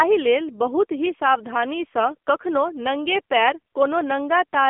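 The speech passed through an AMR narrowband mobile codec running at a very low bitrate, with heavy coding damage that fits a 6.7 kbps mode. The coder rebuilds the voice from a vocal-tract model driven by a few pulses per 5 ms subframe, discarding fine detail. Across the whole recording the band is confined to about 250 Hz to 3.5 kHz, so the speech sounds thin and boxed-in, with a buzzy, synthetic edge.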